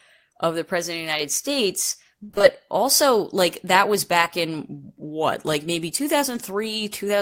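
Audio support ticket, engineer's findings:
Repeated packet loss (robotic sound), 2.23–2.45 s. Choppy stretch lasting about 0.22 s. Sounds like around five separate holes, longest 58 ms. Probable component: network jitter buffer and packet-loss concealment. Lost or late packets patched by extending preceding audio, about 54 % of span concealed. Next hole arrives before recovery, so repeated fill produces robotic texture with fragments missing.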